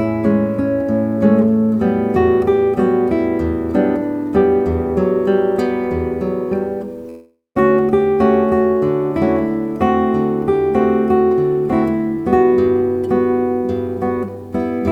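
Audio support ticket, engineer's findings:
Call audio freeze, 7.09 to 7.57 s: sound stretches into a fading buzz, about 160 ms of it silent, then resumes where it stopped. Likely packets stalled and the jitter buffer ran dry. Nothing lost, just a gap inserted.

Jitter buffer speed-up, 12.25 to 14.80 s: runs about 9% fast at unchanged pitch, sounds rushed. Buffer overfilled, so it trimmed pitch periods, roughly 0.3 s in total.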